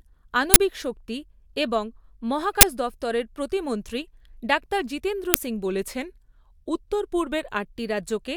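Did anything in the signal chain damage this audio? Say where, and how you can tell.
Yes. At the driver or buffer stage there is an uninitialised buffer fault, heard three times as abrupt, loud bursts of digital noise in the speech: 0.54 to 0.56 s, 2.61 to 2.63 s, and 5.34 s. The first two last 20 ms and the third 10 ms, so each matches one block played out before any audio was written into it. Leftover memory was sent to the output as if it were samples. On the waveform each burst is a sudden slab with hard edges. The spectrogram shows full-band vertical stripes.

From 5.65 s to 7.67 s the speech slows by about 5.3% and drops by about 95 cents, just under a semitone. After those two seconds it snaps back to normal speed and pitch. Speed and pitch move together and the change starts and stops abruptly, which points to a drift correction step. A clock-matching stage at playback likely resampled at a fixed offset to refill its buffer. 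The spectrogram shows the harmonic stack stepping down together over that span and jumping back at 7.67 s. The waveform shows the same stretch slightly elongated.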